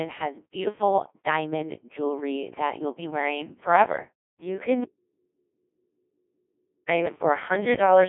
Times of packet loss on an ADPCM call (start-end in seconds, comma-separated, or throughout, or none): none